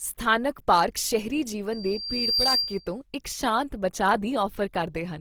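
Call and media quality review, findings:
Likely Opus codec in music (CELT) mode, bit budget starved, consistent with roughly 24 kbps. Speech throughout sounds grainy and rough, with noisy band fill replacing fine detail. Fullband, content reaching 20.3 kHz.

Loudspeaker feedback squeal, 1.72 to 2.96 s, after "ਪਾਰਕ ਸ਼ਹਿਰੀ", before "ਇੱਕ ਸ਼ਾਂਤ ਬਚਾਅ". Mic-to-speaker loop gain exceeded unity at 4.7 kHz. A single tone swells over roughly 0.7 s, then sits around 5 dB above the speech.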